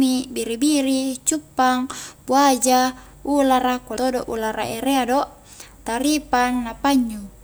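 At 3.97 s, between "cuppang buaja ulara" and "todo ulara erea do", compressed frames are skipped. Whole blocks of coded speech never reach the output, either lost from the file or rejected by the decoder as damaged. The audio jumps forward by around 150 ms. That fits roughly two frames of 85.3 ms each. The join is heard as a sudden jump, with the speech lurching ahead.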